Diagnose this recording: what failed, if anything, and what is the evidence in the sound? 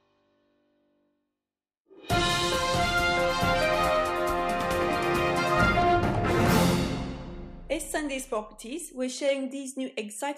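Nothing in the recording points to a failure at any stage of the signal chain. There is no moment where the sound gives evidence of something having gone wrong, so there is nothing to cite.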